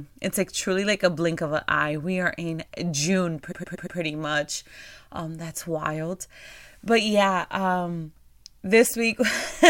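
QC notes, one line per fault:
3.51–3.97 s repeated frames: one 116 ms block stutters four extra times, adding 464 ms.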